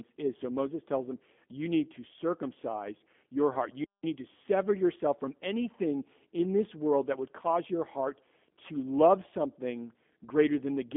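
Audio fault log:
Throughout, G.729 codec: the speech has been squeezed through a low-rate VoIP coder at 8 kbit/s, which keeps only a vocal tract filter shape, a pitch predictor and a handful of pulses per 10 ms frame instead of the waveform itself. The line band runs from about 200 Hz to 3.5 kHz, and nothing is left above 3.6 kHz, so the speech sounds narrow and boxed-in, with a plainly audible rough, synthetic buzz from the rebuilt excitation.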